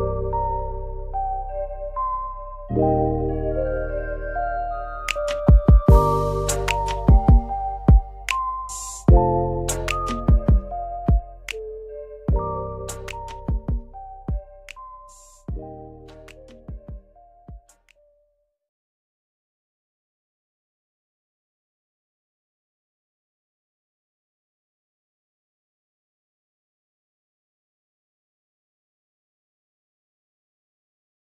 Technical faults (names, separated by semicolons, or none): none